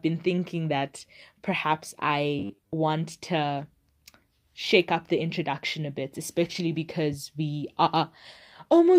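Speech, with robotic sound from repeated short buffers from 2.39 to 2.74 s, right after "been thinking that perhaps": a rigid 100 Hz buzz, likely from roughly 10 ms chunks recycled through most of that stretch, fixed in pitch unlike codec warble.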